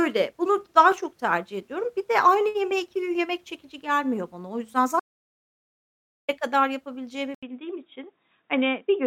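The input was most likely lost between 5.00 and 6.29 s while the recorder kept writing silence, an audio dropout to silence. The speech cuts off abruptly, leaving about 1.3 s of silence with no room tone, and then resumes mid-flow with that stretch missing.

At 7.35 s the input was likely switched to a poorer device, which carries on to the end. After a brief 80 ms silence at the switch, the speech turns dull and boxy with nothing above 3.8 kHz. A faint new noise floor sits well below it, while loudness stays about the same.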